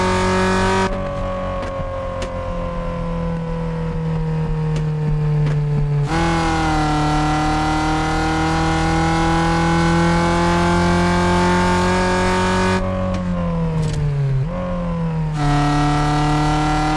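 No technical faults can be heard anywhere in the recording.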